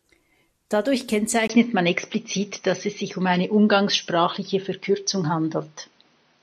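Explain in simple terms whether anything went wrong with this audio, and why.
At 1.48 s the speech briefly drops out and then turns duller, with nothing above about 6.2 kHz. It also gets a little louder, with new faint background noise. This is an input switched to a poorer device, likely a different microphone or headset taking over.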